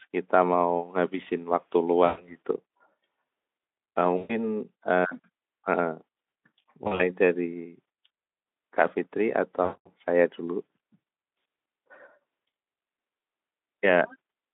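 The speech dissolves into a fading buzz or tinted hiss at 2.06, 4.17 and 9.63 s, the last the longest at about 220 ms; at 6.83 s it stutters through several short dropouts over about 160 ms. This is VoIP packet loss concealed by the speech codec: with packets missing, the Speex decoder keeps extending its last pitch and spectral shape while lowering the level, so sound smears into tone, and recovery after each gap stays weak briefly.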